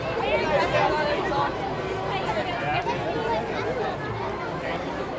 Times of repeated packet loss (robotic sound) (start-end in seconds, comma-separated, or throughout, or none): none